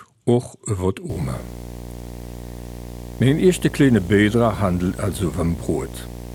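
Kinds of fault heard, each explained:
Video or display buzz: a screen or video cable is coupling its picture timing into the audio path, putting a buzz at the 60 Hz field rate under the sound from 1.09 s to the end of the clip, roughly 15 dB below the signal, with harsh hash above it. On a spectrogram it shows as a steady horizontal line at 60 Hz with a comb of harmonics climbing upward; the waveform carries a repeating ripple every 16.7 ms.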